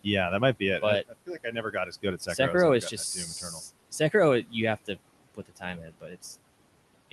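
From 1.08 to 2.39 s, the noise suppressor cuts into the speech. It mistakes parts of the speech for the room noise, which sits about 21 dB below the speech. For a little under half a second in total, soft sounds drop by up to about 17 dB and seem swallowed. It happens again from 5.35 to 5.63 s, briefly, at about 17 dB. From 5.79 to 6.24 s, about 12 dB is lost, and the speech sounds faint.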